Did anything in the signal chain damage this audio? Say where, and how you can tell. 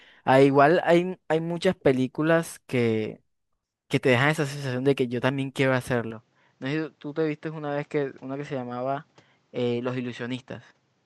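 Yes. From 6.11 s to the end, the speech turns duller and steps down about 5 dB with no gap. Spectrograms show nothing above 8.1 kHz and a new noise floor roughly 40 dB down, likely the input switched to a poorer device.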